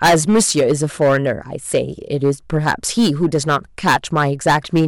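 Hard clipping runs throughout the speech: the level is driven about 16 dB too hot, flattening roughly 7 percent of samples into a harsh fuzz.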